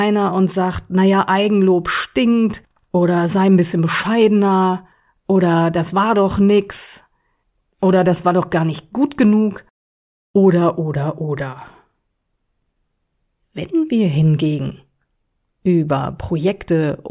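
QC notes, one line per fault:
No fault found.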